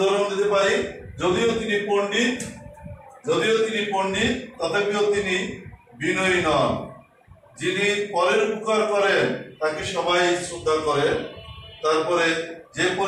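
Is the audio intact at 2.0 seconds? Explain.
Yes, the audio is intact at 2.0 seconds, with no dropout, click, distortion or other fault at that point.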